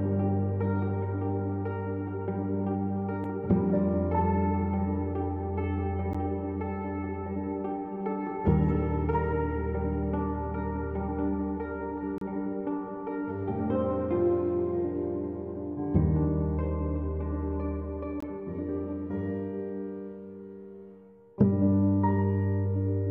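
Gaps between stream segments: misaligned time stamps at 6-second segment joins leave holes the player fills with silence, cutting hard-edged dropouts at 6.13 s, 12.18 to 12.21 s and 18.20 to 18.23 s.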